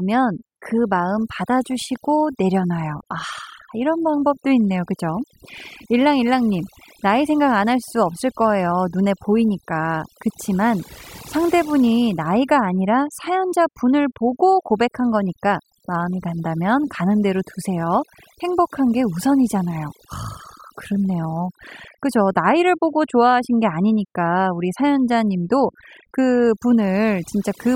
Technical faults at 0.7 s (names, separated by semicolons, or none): overdone noise removal